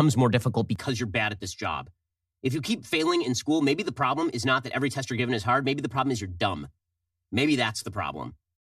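Channel delay causing comb filtering runs through this speech clip from 0.76 s, just after "more difficult", to the end. One channel arrives roughly 3 ms behind the other, and when the two are summed to mono the shared signal cancels at evenly spaced frequencies, starting at around 150 Hz. Those fixed notches carve the spectrum into a regular comb, leaving the sound hollow and phasey.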